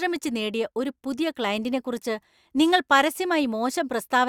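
Nothing goes wrong anywhere in this bit of speech, so there's no fault to point to.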